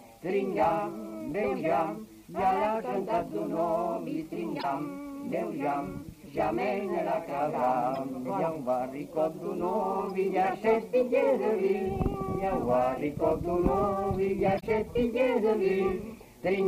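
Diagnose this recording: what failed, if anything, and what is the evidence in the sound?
Brief chirps and noise bursts at 4.59–4.65, 7.95–7.97, 10.08–10.10 and 14.57–14.63 s, up to about −20 dBFS: corrupt frames decoded at the codec stage, with bit errors misplacing spectral energy.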